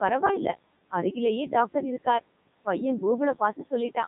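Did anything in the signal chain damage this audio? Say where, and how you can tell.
Yes. Codec 2 vocoder damage runs through the whole clip at the codec stage. The speech is robotic and buzzy because the decoder rebuilds it from sine waves using only pitch, voicing, energy and spectral envelope, discarding the waveform. The damage is heavy even at its top 3.2 kbit/s mode, and the room noise, about 21 dB below the speech, is mangled along with it.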